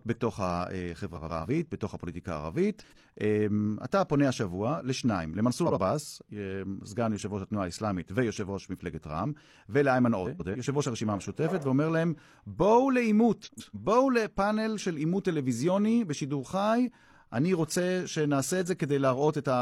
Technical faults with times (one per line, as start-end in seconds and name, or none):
1.15-1.46 frames out of order
2.80-3.02 frames out of order
5.66-5.78 frames out of order
10.25-10.56 frames out of order
13.44-13.75 frames out of order